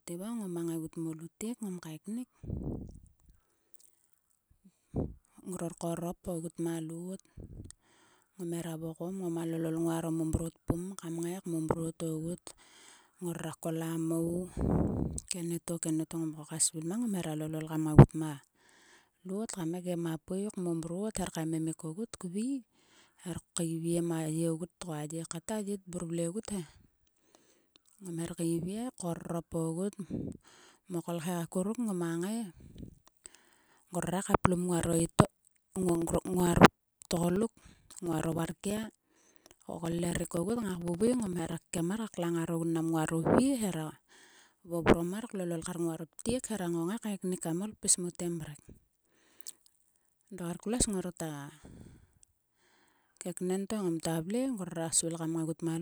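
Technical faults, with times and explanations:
34.80–41.78 s: periodic USB or driver dropouts, roughly 4 ms silent gaps every 64 ms; their strict regularity, audible only under sound, separates them from random clicks.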